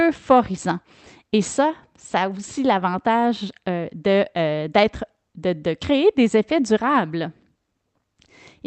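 Nothing here stands out as a fault: the speech simply came over an ordinary call link, with the highs rolled off around 8 kHz in a way that fits an Opus stream at something like 32 kbps.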